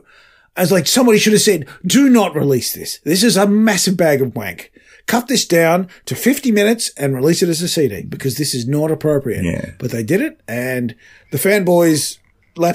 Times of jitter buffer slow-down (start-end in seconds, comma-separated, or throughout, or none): none